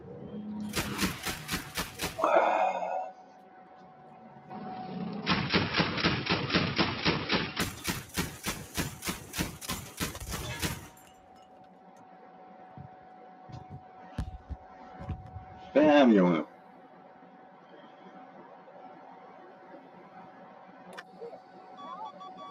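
Throughout the clip a noise suppressor built for speech stays active on sound it was never meant to handle. It treats sustained tones, room ambience and reverb tails as unwanted noise and pulls them down, while sharp onsets slip through. Gain swings of roughly 10 dB make the sound pump and thin. Unlike a compressor, it does not track overall loudness. It reacts to how steady a sound is, so held material sinks however loud it is.

From 3.21 to 4.23 s comes the first clear case of sound cut by the noise suppressor. For about a second, steady or decaying material dips by up to about 4 dB and its tail is clipped short, while transients stay intact. It sounds like sustained sound being eaten from underneath rather than a fade of the whole mix.

From 4.50 to 7.60 s the band narrows, so the sound turns dull and boxy. The level shifts by a few decibels, and a faint new background noise sits far below the signal. 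There is no silence at the changeover. The likely cause is the input switching to a poorer device. A filter or codec change would not bring its own noise floor and level shift, and both clear up again at 7.60 s.

From 11.06 to 13.49 s the noise suppressor cuts sound again, over about two seconds. Sustained and fading material drops by up to about 4 dB while attacks survive.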